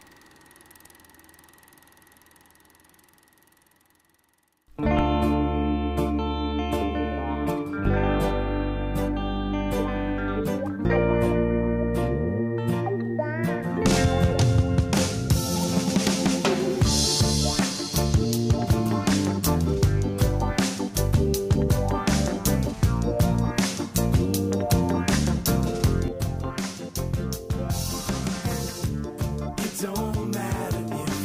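At 26.08 s the level just drops, about 6 dB down in a single step, and it stays there through to the end. It's a sudden gain jump: the sound and the background noise fall together, with no fade at all, so the change lands between one sample and the next. The likely cause is a gain setting, or something like a bit shift, being applied without any ramp to smooth it in.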